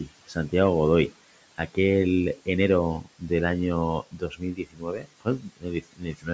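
From 0.28 to 0.53 s, the noise suppressor cuts into the speech. It mistakes part of it for background and turns it down by about 14 dB, for roughly a tenth of a second in all. The sound there turns faint and swallowed. It happens again from 4.11 to 6.29 s, and harder. The drop reaches about 19 dB and touches around one and a half seconds of speech. The speech there sounds swallowed.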